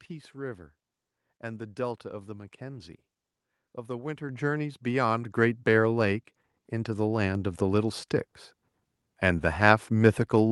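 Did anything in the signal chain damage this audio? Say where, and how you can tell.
Yes. The microphone volume stepped up at 4.29 s, during call processing. Speech and background noise jump together by about 8 dB in a single step. That points to the call software raising the device's input gain, not to the talker getting louder.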